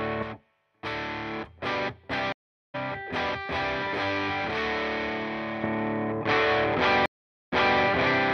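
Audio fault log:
2.32–2.75 s stream reconnect: the connection drops for 0.42 s of silence, then a fresh decoder joins mid-stream, skipping the audio forward by around 0.4 s.
7.06–7.80 s stream reconnect: 0.46 s of silence, then the restarted decoder picks up 0.28 s earlier from a resent burst, so a stretch of sound repeats.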